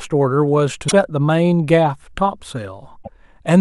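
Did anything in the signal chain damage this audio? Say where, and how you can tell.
Yes. Damaged data in the compressed stream: brief glitches at 0.88–0.93 s and 2.99–3.09 s. Corrupt frames broke the decoder's sync at the codec stage.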